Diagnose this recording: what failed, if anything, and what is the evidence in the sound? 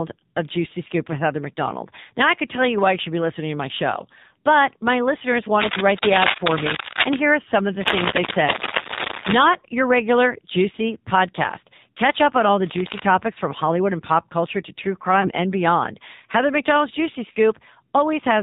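The whole recording has passed through the AMR narrowband mobile codec, at the codec stage. Nothing above 4 kHz survives, and the speech has the buzzy, synthetic edge of a low-rate mode, consistent with AMR-NB at around 7.4 kbps. On a spectrogram the energy stops flat at 4 kHz, with smeared, blocky harmonics. The vocal-tract model and sparse pulse excitation rebuild each 20 ms frame only approximately, so the fine detail is lost.

Cable scratch noise appears in three bursts, most likely from a worn cable, connector or control in the analogue wiring. The first, from 5.61 to 7.17 s, sits about 5 dB above the speech. The second, from 7.81 to 9.40 s, is roughly level with it. A shorter one, from 12.65 to 13.0 s, is about 5 dB below. Rapidly changing contact resistance adds dense, uneven crackle. A spectrogram shows irregular broadband speckle, and the waveform shows ragged spikes riding on the signal.

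Lost AMR speech frames occur at the network and codec stage, at 9.60–9.65 s and 15.22–15.30 s. Each event is a brief dip and warble of about 20 ms, which points to a single dropped frame each time. The decoder covers a frame that failed its checksum by repeating the last good pitch and filter settings at reduced gain. The result is a short notch in the waveform envelope and a slightly smeared, static slice on the spectrogram.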